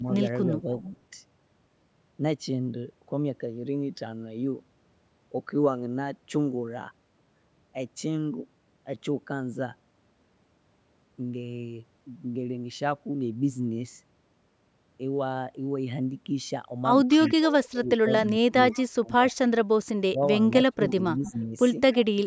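Speech recorded through a call, with two faults. Speech suppressed in double talk appears from 0 to 0.94 s as a slight dip of about 5 dB. From 17.17 s to the end it returns much harder, cutting the voice by up to about 30 dB across roughly two seconds. The likely cause is an echo canceller turning everything down while both sides talk. An echo leak follows the voice at a 0.3 s delay at 0.46–0.89 s, 17.25 s, 18.72–19.34 s and 21.25–22.05 s. It starts faint, about 35 dB down, and grows to about 20 dB down by the end, likely loudspeaker echo the canceller missed.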